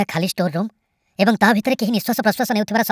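From start to finish the speech sounds chipmunk-like and rushed, running about 1.45 times too fast and pitched roughly 6.5 semitones high. This is a wrong sample rate: the ratio fits audio recorded at 22 kHz being played back at 32 kHz without conversion.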